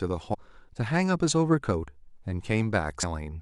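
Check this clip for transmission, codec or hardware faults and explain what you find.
There's one kind of fault here: compressed frames skipped, twice. At 0.33 to 0.35 s and again at 3.02 s the speech jumps ahead by roughly a third of a second, which points to around ten whole frames of about 26.1 ms each being lost from the file or rejected by the decoder. Because adjacent frames overlap, each join comes out as a short smeared blip rather than a hard click.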